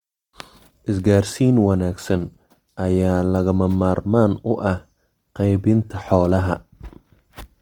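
A speech clip carrying plainly audible Opus compression from start to finish: the speech sounds grainy and rough, likely from the music (CELT) mode at a low bitrate near 24 kbps, with bands filled by noise or folding. On a spectrogram, the upper bands look speckled rather than holed, with a ceiling near 20.1 kHz.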